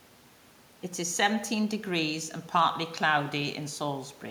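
Speech recording, no technical faults heard at any point.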